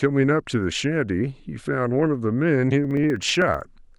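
Periodic USB or driver dropouts run from 2.85 to 3.93 s, about twenty short losses spaced 63.5 ms apart. Each time, something stalls the audio path and roughly half a millisecond of speech is skipped, giving a rapid, regular ticking over the speech.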